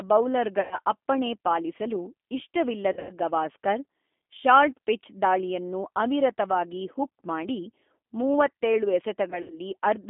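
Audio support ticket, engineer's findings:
G.729 codec, whole clip: band-limited to 250 Hz to 3.5 kHz, rough synthetic timbre consistent with 8 kbit/s G.729A. Pitch-and-filter speech model with sparse pulse excitation.

Packet loss concealed by the speech codec, 0.61 to 0.79 s, 2.93 to 3.14 s, and 9.30 to 9.59 s: buzzy, fading smear, with weak recovery after each gap. Roughly 100 ms, 140 ms and 100 ms of audio is missing, and the last two gaps are scattered. The decoder extrapolates its last pitch and filter to fill the gaps.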